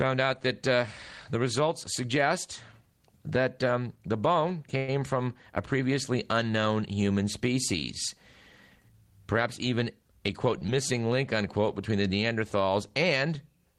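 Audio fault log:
4.77–4.90 s, call audio freeze: the speech stops and its last sound is drawn out for about 105 ms as a fading buzz, likely because packets were held up in transit and the jitter buffer ran empty. The speech then resumes from where it stopped, with nothing lost and a later timing. On a spectrogram the final frame's partials run as flat, dimming horizontal streaks with no new onsets.
10.59–10.63 s, short stall from a late packet: one sound is held about 22 ms too long because a packet was not there when it was due, so the receiver stretched what it had until it arrived. Nothing is missing, and a faint buzz or dip can be heard. The waveform shows a brief repeated, slightly sagging cycle before normal speech returns.
10.67–10.70 s, short concealed packet loss: about 40 ms of speech never reached the decoder in time, and the receiver bridged the gap with about 12 ms of continued sound before blending back. 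The delay shortens by roughly 30 ms, which is heard as a quick smear or wobble where a short sound may drop out. On a spectrogram there is a short blurred patch and then a small jump in the pattern.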